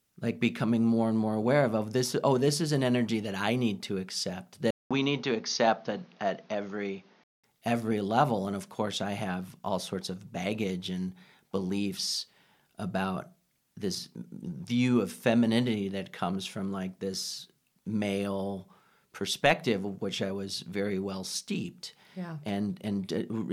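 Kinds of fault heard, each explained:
Input switched to a poorer device: speech turns duller, likely from a device change; the spectrogram shows nothing above 6.7 kHz, a 200 ms waveform gap, and new noise about 30 dB down.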